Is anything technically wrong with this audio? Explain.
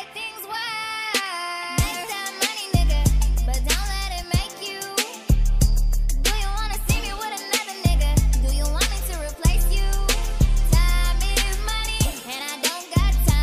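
No, nothing stood out as a technical problem on listening.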